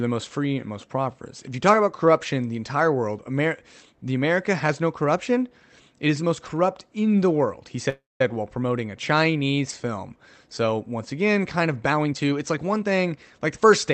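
A speech clip over a call path, with Opus coding audible and the top cut at 8 kHz. From 7.89 to 8.29 s, after "in the world he", a call audio freeze fills a gap with fading buzz and near-silence, likely from delayed packets. Speech resumes at "while promoting a". From 11.86 to 13.59 s, after "once again kind of", a jitter buffer speed-up trims tiny pitch-period pieces. Speech runs about 118% fast at unchanged pitch and loses roughly a third of a second.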